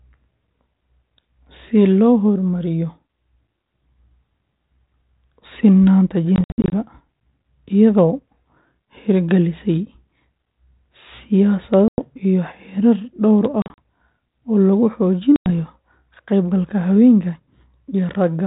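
Packet loss on an ADPCM call at 6.36–6.82 s, 11.88–12.09 s, 13.62–13.78 s and 15.36–15.48 s: hard silent gaps, then the decoder's predictor is out of step, so speech returns slightly distorted.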